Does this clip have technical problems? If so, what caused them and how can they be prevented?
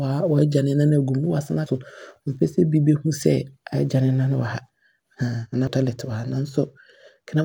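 Yes. Damaged data in a compressed stream causes brief blips at 1.66 s and 5.67 s. Corrupted bytes break a frame there. The decoder misreads it, loses sync and hunts for the next frame header. Prevention: verify transfers with checksums and keep stream metadata out of audio frames.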